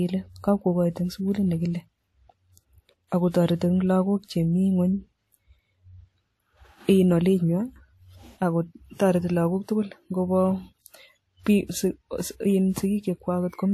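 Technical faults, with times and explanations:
Throughout: transcoding between lossy codecs. Nothing is heard above 16.4 kHz, so the top of the spectrum is cut flat. Two kinds of coding artefact sit together in the speech. The likely cause is audio encoded with AAC-LC and then re-encoded with WMA, both at a rate that suggests about 64 kbit/s. The second encoder spends its bits on the first one's damage, adds its own, and keeps the lower cut-off.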